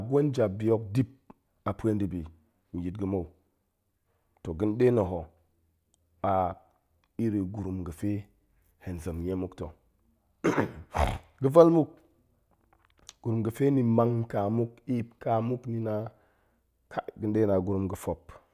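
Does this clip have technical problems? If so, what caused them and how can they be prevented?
No, this clip has no technical problems, so there is nothing to trace back or prevent.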